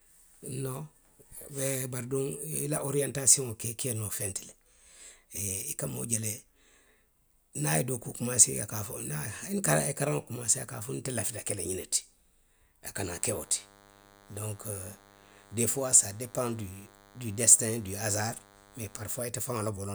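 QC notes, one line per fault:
13.18–19.28 s, DECT cordless phone buzz: a thin, steady buzz at 100 Hz rides under the speech for about six seconds near the end, sitting well below it, roughly 30 dB down. A nearby DECT handset or base transmits a brief radio burst every 10 ms, and the audio circuitry rectifies each burst into a click, so the repeating pulses form a buzz rich in harmonics. Mains hum is a smoother, rounder tone at 50 or 60 Hz, while this buzz is sharper and more rasping.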